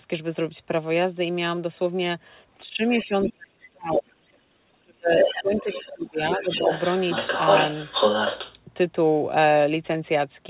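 From 2.58 to 4.26 s, and again from 4.71 to 6.69 s, the talker's speech is suppressed in double talk. It drops in pieces, by as much as about 35 dB, for roughly a second and a half each time. The echo canceller likely took the overlapping speech for echo and turned it down.

Meanwhile, the other side's voice leaks through. From 2.86 to 4.38 s it sits about 15 dB below the talker. From 5.16 to 8.55 s it is about as loud as the talker. It is likely loudspeaker echo that the canceller failed to remove.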